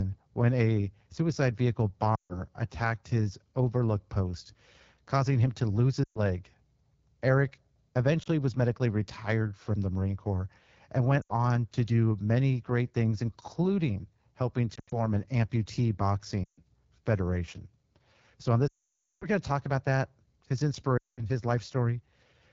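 Throughout, the speech carries the sound of the AMR wideband (HD Voice) codec at 8.85 kbit/s, one of its two lowest rates. At that rate the model of the vocal tract and its pulse excitation is starved of bits. The result is plainly rough and raspy. The top band is synthetic noise rather than real detail.

Lost AMR speech frames cause eight dropouts. The decoder fills each gap by repeating the last good pitch and tract settings while fading the gain. The gaps fall at 2.16 to 2.38 s, 6.04 to 6.19 s, and 8.23 to 8.28 s, just before "was medically retired from". They continue at 11.22 to 11.32 s and 14.75 to 14.93 s, between "great things including helping" and "an amputee". The last three are 16.44 to 16.60 s, right after "an amputee", 18.67 to 19.26 s and 20.97 to 21.24 s. The brief one at 8.23 s is a quick dip. The longer ones drop to near silence within two frames. At 14.75 s the losses are scattered over 160 ms. 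The worst gap, at 18.67 s, hides about half a second.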